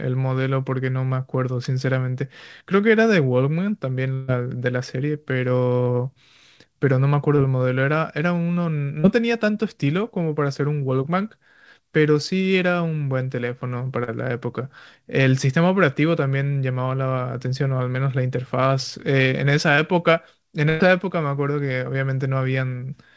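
Speech that twice turns into a held buzz or fading hiss, from 4.14 to 4.30 s and from 20.69 to 20.82 s, then resumes further along with about 140 ms and 100 ms missing. These are bursts of packet loss: several consecutive packets never arrived, so the receiver kept extending and attenuating the last sound instead of going silent. Shorter smears or wobbles, where a consonant can drop out, occur at 7.36–7.40 s, 9.00–9.06 s, 14.04–14.09 s and 19.75–19.79 s. This is short concealed packet loss of roughly 20 to 40 ms, patched by continuing the preceding sound and blending back into the real signal. Across the whole call path the audio stops at 8 kHz, which fits a wideband call codec such as G.722.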